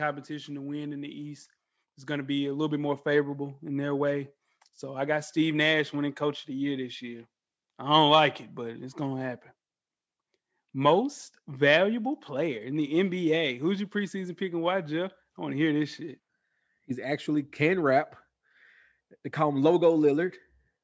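Automatic gain rising hits this speech recording from 2.06 to 9.39 s, as the gain control judges the input too quiet and lifts it by about 5 dB, so voice and background swell together.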